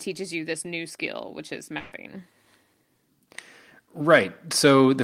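A burst of packet loss hits at 1.77 s, right after "new skill which is", and lasts until 1.93 s. About 140 ms of audio never arrived. The receiver stretched the last sound across the gap while fading it down, and the speech then resumes further on with that stretch missing.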